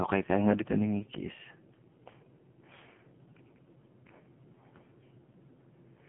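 From start to finish the speech has been through an AMR narrowband mobile codec: nothing above 3.5 kHz, a thin phone-line band, and heavy buzzy, synthetic smearing that fits a low mode around 5.9 kbps.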